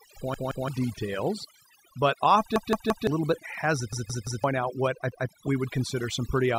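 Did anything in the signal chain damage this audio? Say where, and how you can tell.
Yes. At the call-processing stage, overdone noise removal runs throughout: the suppressor shuts off bands near its noise estimate, leaving twinkling specks in near-silence.

At the driver or buffer stage, a repeated buffer stutters at 0.34–0.68 s (before "details but"), 2.56–3.07 s, 3.93–4.44 s (before "out what I") and 5.12–5.29 s. Each 171 ms chunk replays with hard joins, which fits an 8192-sample buffer.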